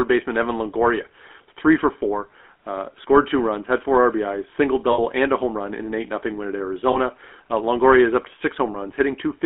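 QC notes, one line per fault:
throughout GSM full-rate codec. Buzzy, gravelly roughness over the speech, band-limited to about 250 Hz–3.4 kHz. Pulse-driven vocal-tract modelling fits a 13 kbps full-rate coder.
4.92–5.00 s, 6.92–6.97 s, 8.72–8.76 s lost GSM frames. Brief metallic ring just before "and a home run", after "win at", after "is up to". Missing frames are patched by repeating the last good one.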